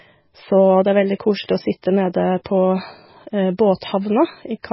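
From start to finish the speech carries heavy MP3 compression damage, likely from a very low bitrate around 16 kbps. Nothing survives above 5.6 kHz, so it sounds dull. Weak frequency lines flicker in and out between frames. That gives a watery, swirly texture, with smeared attacks.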